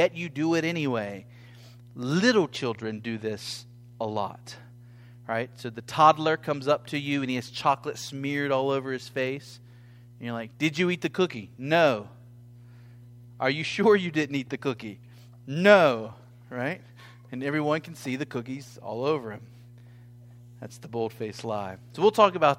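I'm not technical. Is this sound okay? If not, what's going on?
No. Mains hum runs under the speech from start to finish: a steady, low buzzing tone at 60 Hz, the frequency of the electrical supply. It sits well below the voice. Electricity from the power line has leaked into the recording, probably through a ground loop between connected equipment or from a nearby transformer. It doesn't come and go, so it is still there during pauses between phrases.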